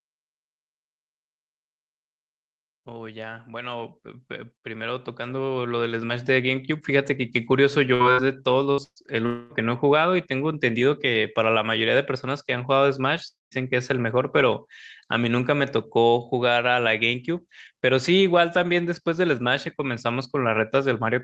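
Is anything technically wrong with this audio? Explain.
Yes. From 2.85 to 7.2 s, automatic gain rising: the gain control judged the input too quiet and raised it by about 12 dB, so the speech and background swell together.

A burst of packet loss occurs at 7.94, 8.12, 8.71 and 8.84 s. Each time, about 60 ms of audio never arrived (120 ms at 8.84 s), and the receiver stretched the last sound into a fading buzz or hiss. At 8.84 s this falls to silence for about 70 ms before the audio jumps ahead.

Two longer gaps of about 240 ms, at 9.26 to 9.53 s and 13.28 to 13.54 s, are likely long network dropouts. In the first, the concealment fill fades across the whole gap. In the second, it quickly drops to near silence before the speech resumes with a piece missing.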